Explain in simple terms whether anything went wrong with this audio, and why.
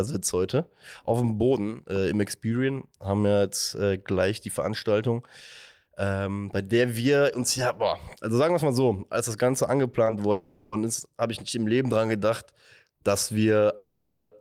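Call audio freeze at 10.31–10.74 s, just before "ist habe ich nicht", and at 13.76–14.33 s, after "dran gedacht dass". The speech stalls into a fading buzz, likely from delayed packets, then resumes with nothing lost.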